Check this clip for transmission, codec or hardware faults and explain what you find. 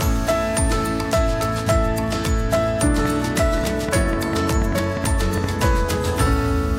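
One fault is present: a train of clicks from 3.05 s to 5.45 s. Sharp, similar-shaped pulses arrive about 5 times per second, at an uneven pace, around fifteen in all. They stand out sharply, roughly 10 dB above the surrounding audio. The cause is likely electrical interference from nearby equipment or a faulty connection or power supply, injecting the same brief spike again and again. It is heard as irregular ticking or popping laid over the sound.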